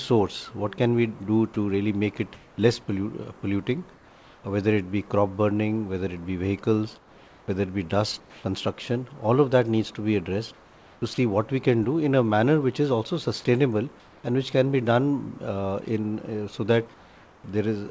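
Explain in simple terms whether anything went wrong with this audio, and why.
Yes, two related things go wrong, both tied to the system that decides when there is sound worth sending.

Comfort noise in place of the background: at 1.54 to 2.58 s, 3.94 to 4.44 s, 6.98 to 8.44 s, 10.54 to 11.18 s, 14.00 to 14.24 s and 16.94 to 17.44 s, the real background is swapped for a smooth, even hiss. In the gaps at 3.94, 14.00 and 16.94 s it is also a little quieter. The likely cause is the sender pausing transmission when it judged nothing important was happening, with the receiver filling the silence with generated noise. Nothing meaningful is lost here. Only the texture of the room changes.

Sound dropped by the voice detector: at 1.54 s and again at 11.14 to 11.18 s, a brief bit of actual sound, not just background, disappears into that same hiss. The likely cause is the detector mistaking a bit of real sound for background and cutting it off. 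This is what sets it apart from plain comfort noise: here something you should have heard is missing, rather than only the background being smoothed over.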